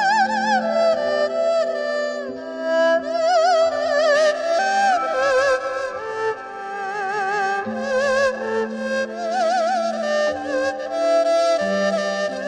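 The audio has one fault. From 4.15 s to the end, periodic clock jitter at around 1 kHz shakes the sampling clock, giving a rough, metallic edge; a spectrogram shows sidebands about 1 kHz either side of every component, strongest at high frequencies.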